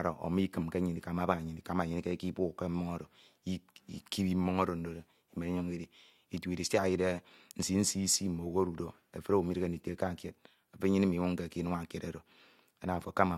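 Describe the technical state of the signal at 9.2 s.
At 9.2 s the speech signal is intact, with no fault to be heard at that moment.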